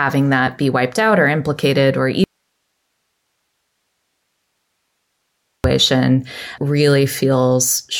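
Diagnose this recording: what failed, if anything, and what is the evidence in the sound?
The signal path was likely interrupted upstream, in the analogue wiring or input connection, while everything after the break stayed live. The result is an audio dropout to a faint residue: the speech cuts off abruptly at 2.24 s, right after "out or implicated or", and for about 3.4 s, until 5.64 s, only hiss remains, roughly 55 dB below the speech level. The edges are hard cuts, not a pause or fade.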